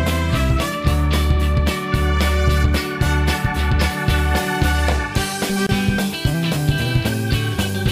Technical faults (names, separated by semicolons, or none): gap at a join of encoded pieces